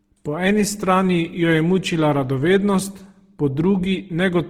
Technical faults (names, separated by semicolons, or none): Opus compression